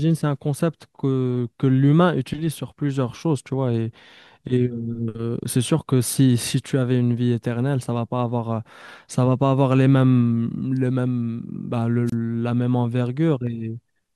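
At 12.06 to 12.14 s, a wireless microphone squelch dropout: the radio link fades, hiss rises briefly, then the receiver mutes the speech for about 27 ms before it returns.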